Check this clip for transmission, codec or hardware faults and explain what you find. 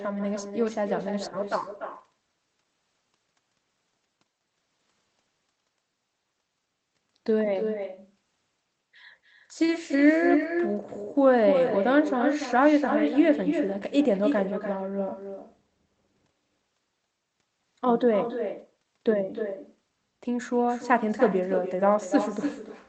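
One fault runs through the whole speech recording: echo with no canceller. Every phrase is followed by a second, weaker copy, about 7 dB below the direct speech, trailing by roughly a third of a second. The far end is playing the call through a loudspeaker, and its microphone captures that output and sends it back across the network. No echo canceller removes it, so the talker's own speech returns after the round trip. The copy sounds thinner than the original. The call path itself sounds like a wideband codec, with audio extending to about 8 kHz, and its coding noise is what that kind of link normally produces.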